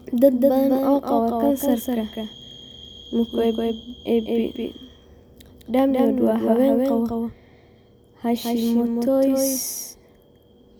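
A doubled audio track runs through the whole speech clip. A second full-band copy trails the original by roughly a fifth of a second, somewhat quieter, with no decay or room colour. The likely cause is a slower capture path or an edit holding two offset copies.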